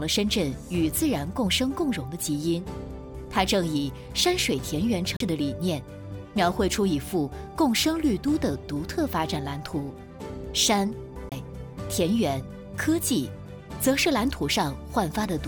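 At 5.16–5.20 s and 11.29–11.32 s, CD skips: the laser jumped tracks, muting briefly (roughly 40 ms, then 20 ms) with a short gap. The waveform shows a flat gap, the spectrogram an abrupt discontinuity.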